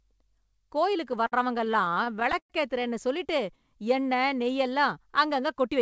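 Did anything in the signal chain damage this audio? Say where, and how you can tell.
Yes. Between 1.12 and 2.52 s the speech shows repeated stalls (stutter), a fault in the network and jitter-buffer stage of the call path (G.722, with nothing above 8 kHz). Packets arrived late, so the buffer ran dry twelve times. Each time the receiver stretched the last sound to fill the hole, fading it in the longer waits, up to 109 ms. About 270 ms of filler, roughly a fifth of that stretch, makes the speech drag and stutter, though none of it is lost.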